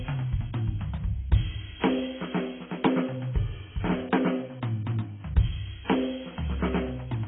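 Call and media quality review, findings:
Likely AAC compression at a very low bitrate, around 16 kbps, throughout: music band-limited to 3.7 kHz, heavily quantised, sounding dull and smeared with warbling sustained notes.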